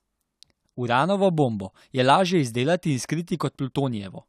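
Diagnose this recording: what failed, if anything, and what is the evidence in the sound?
Clock drift buffer slips, 0.70 to 3.92 s: four clicks in the speech, spaced 1.07 s apart. The likely cause is a buffer between two devices whose clocks differ by around 150 ppm, so each slip drops or repeats a handful of samples.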